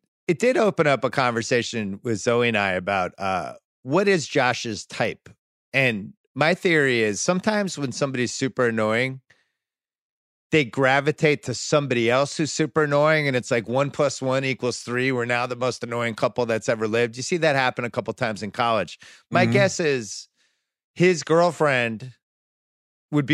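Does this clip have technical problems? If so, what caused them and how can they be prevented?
No, nothing stood out as a technical problem on listening to this speech clip, so there is no cause to trace or prevention to suggest.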